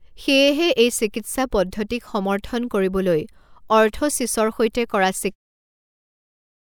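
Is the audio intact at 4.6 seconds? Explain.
Yes, the speech at 4.6 seconds is intact, with no dropout, click or distortion at that point.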